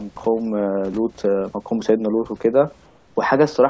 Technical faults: comfort noise in place of the background

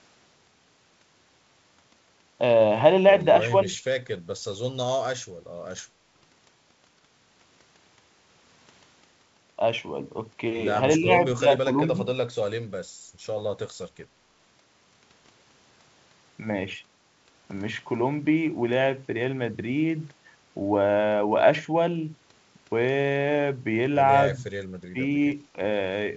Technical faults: speech suppressed in double talk

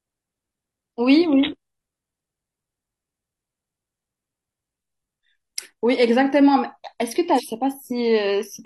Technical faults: damaged data in a compressed stream

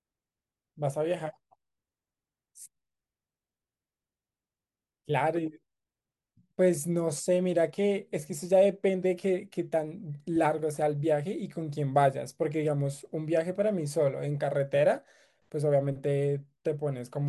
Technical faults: none

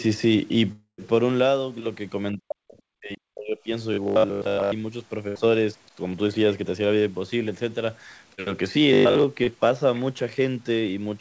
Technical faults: long network dropout; speech suppressed in double talk; robotic sound from repeated short buffers; burst of packet loss; other side's voice leaking through; short concealed packet loss

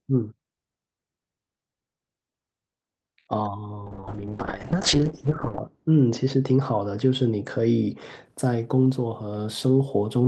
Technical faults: call bitrate drop

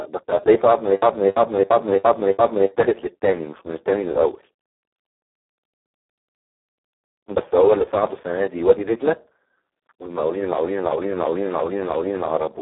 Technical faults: Speex codec

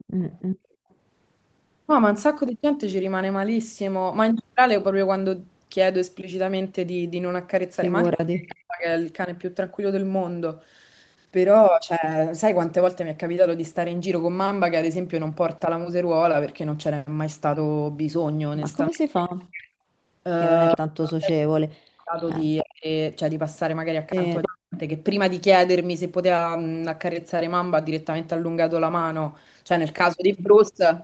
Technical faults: echo leak; background gated by the echo canceller; speech suppressed in double talk

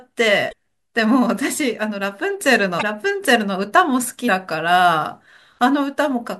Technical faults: damaged data in a compressed stream

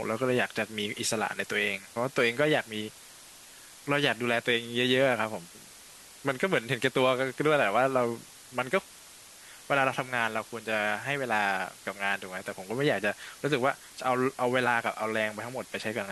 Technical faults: low bit depth with dither

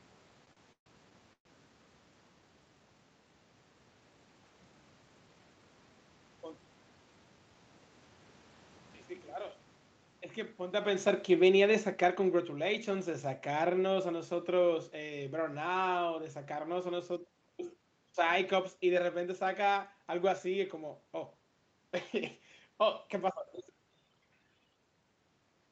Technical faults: repeated stalls (stutter); automatic gain falling; jitter buffer speed-up

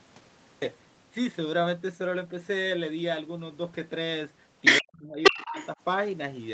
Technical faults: cut-off start; other side's voice leaking through; speech suppressed in double talk

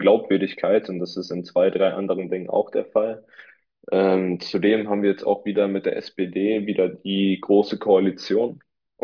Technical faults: none

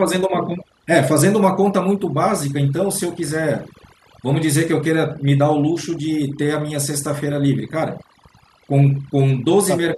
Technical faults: overdone noise removal

